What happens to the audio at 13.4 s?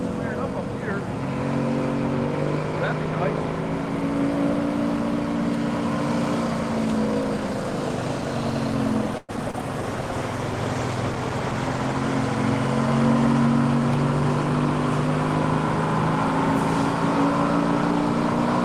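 Nothing goes wrong at 13.4 s; the audio carries on intact through that moment with no dropout, click or other fault.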